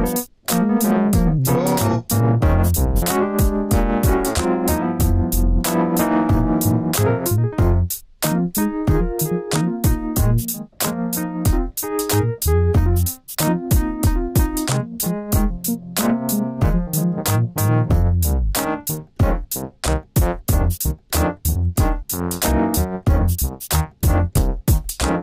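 At 24.36 to 24.38 s, near the very end, there is a brief case of chunks out of order. A block of about 11.6 ms arrived late and plays one block after where it belongs. No audio is missing. The two blocks simply swap places. That swap leaves three hard joins where the waveform jumps. It is heard as a tiny jumbled stutter, lasting only a couple of hundredths of a second.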